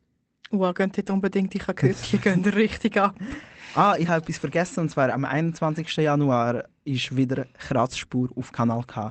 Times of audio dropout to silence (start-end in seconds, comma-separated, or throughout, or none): none